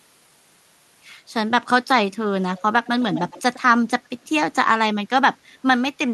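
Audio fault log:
2.85 to 3.6 s, echo leak: a second copy of the speech trails the original by about 110 ms, sitting roughly 10 dB under it, so it sounds doubled. Likely a far-end speakerphone whose echo canceller let some of its mic pickup slip back down the line.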